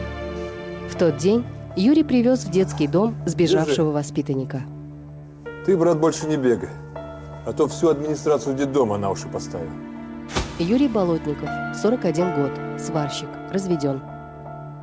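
No technical faults are audible.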